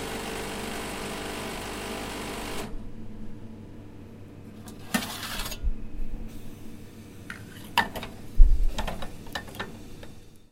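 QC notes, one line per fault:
Nothing to flag here; I heard no faults anywhere in this one.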